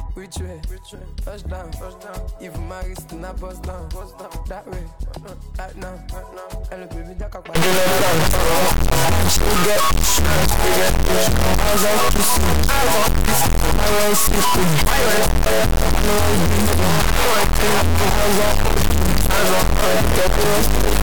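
From 7.55 s to the end, the sound collapses into an extremely loud, harsh buzzing square wave that drops to silence in the quietest moments. This is integer read as float: 32-bit integer samples are interpreted as 32-bit floats, so values land near zero or far past full scale and slam between silence and clipping.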